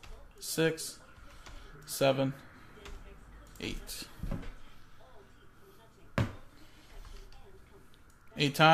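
No technical faults can be heard at any point in the audio.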